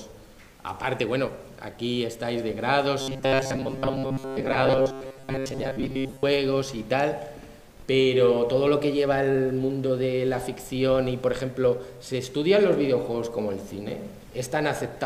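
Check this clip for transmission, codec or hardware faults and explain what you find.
There's one fault: robotic sound from repeated short buffers, 3.01 to 6.23 s. A roughly 7.5 ms chunk likely keeps looping, making a rigid 134 Hz metallic buzz over most of that stretch.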